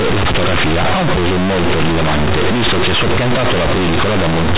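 Companded audio read as linear runs through this speech clip from start to finish: mu-law bytes are being played as plain 8-bit samples without expansion, so every sign change throws the output across half its range, flattening loud and quiet into harsh, buzzy distortion with heavy noise in pauses, over an 8 kHz G.711 path.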